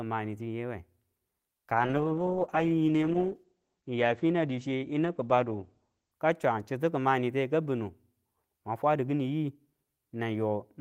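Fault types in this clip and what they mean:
Call bitrate drop: from 1.77 s to 6.21 s the encoder falls back to far fewer bits, a coarseness that fits a slide from about 32 kbps to about 11 kbps, held at its lowest for about 4.4 s. The speech turns muffled and rough or watery. On a spectrogram, energy above 8 kHz vanishes under a flat ceiling where it had reached 20 kHz, with smeared, blotchy detail below. The waveform envelope barely changes.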